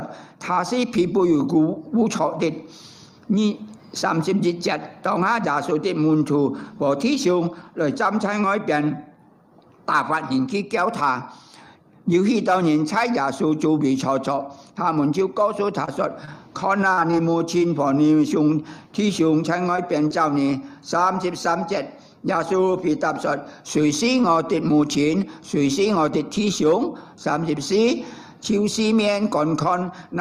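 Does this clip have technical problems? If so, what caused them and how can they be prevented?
Yes. Short concealed packet loss occurs at 15.85 to 15.89 s, 16.25 to 16.29 s, 19.76 to 19.80 s and 20.08 to 20.12 s. Each time, about 20 ms of audio arrived too late or not at all, and the receiver bridged the hole by extending the preceding sound for roughly 20 ms before blending back. Each one is a brief smear or wobble. A jitter buffer with more headroom, or forward error correction, would prevent these.

Repeated packet loss (robotic sound) follows from 16.93 to 17.72 s. The network kept dropping or delaying data, leaving five separate holes that add up to about 80 ms, the longest about 43 ms. Each was patched by continuing the last sound, and the patches make up about 14% of that stretch. The gaps come too close together to blend smoothly, so the passage turns choppy. A steadier connection with prioritised, less congested traffic would prevent this.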